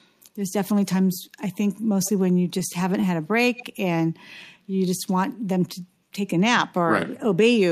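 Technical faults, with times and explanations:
2.04 to 2.11 s, echo leak: a faint copy of the speech trails the original by about 130 ms, roughly 25 dB down, so it comes back only briefly. This is likely a far end on loudspeaker whose echo canceller let a fragment of its microphone pickup return down the line.
2.59 to 3.33 s, scattered short gaps: about four small dropouts, the longest around 20 ms, were each bridged by extending the preceding sound. In total roughly 40 ms, or about 7 percent of this stretch, is synthetic fill, and the span runs about 5 ms longer than it should. The speech stays clear, but each patched hole shows up as a small tick or hiccup.
3.56 to 3.66 s, echo leak: the same delayed copy returns at about 131 ms behind the speech and a little louder, lasting 0.1 s at about 20 dB down. It is heard as a short doubling. The likely cause is again residual loudspeaker pickup that escaped the far end's echo cancellation.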